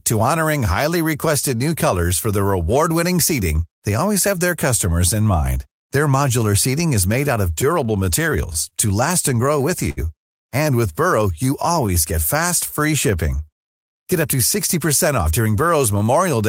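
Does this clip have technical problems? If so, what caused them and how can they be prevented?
Yes. The speech has four network-playout faults, all from 7.6 s onward.

Scattered short gaps run from 7.61 to 8.73 s, right after "is made out of". Packets went missing at about seven separate points, and the receiver covered each hole by carrying the previous sound forward. The longest patch is roughly 30 ms and the total is around 70 ms. That is only a small share of the stretch, so the speech stays intelligible but picks up brief ticks and smears. Prevention: reduce packet loss on the link, for example with forward error correction or better network prioritisation.

A short stall from a late packet comes at 9.90 to 9.99 s. One packet arrived after it was due, the jitter buffer emptied, and the receiver held the last sound for 70 ms until the packet turned up, then resumed where it had stopped. 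Nothing is lost. Instead a sound is drawn out unnaturally, and the playout delay grows by 70 ms. Prevention: keep a slightly larger jitter-buffer margin on paths with variable delivery times.

A jitter buffer slow-down runs from 11.32 to 11.87 s. The receiver built up its reserve by repeating individual pitch periods many times over, adding 36 ms, so this passage plays at 95% speed with the pitch unchanged. Sounds are slightly stretched, possibly with a faint warble. Prevention: stabilise network delay so the buffer seldom needs to refill or raise its target.

A jitter buffer speed-up runs from 13.81 to 15.47 s, following "fast free shipping". The buffer held more audio than it aims for, so the receiver cut out short pitch-period segments, roughly 100 ms in all. The passage plays at 106% speed at the same pitch and sounds somewhat rushed. Prevention: avoid bursty delivery, such as queueing behind bulk traffic, so delayed packets don't arrive in clumps.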